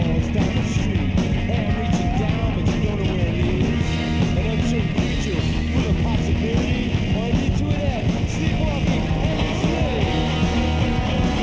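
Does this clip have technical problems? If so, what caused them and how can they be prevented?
No, there are no faults.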